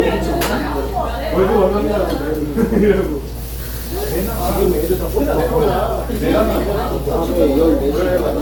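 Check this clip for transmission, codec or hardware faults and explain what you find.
One codec fault runs through the clip. Generation loss, throughout: the sound was likely decoded and re-encoded about seven times through Opus, at a rate that fits 64 kbit/s, each pass quantising on a shifted frame grid. Errors stack, giving swirly, hollow smearing and blurred attacks, with nothing above 20.1 kHz.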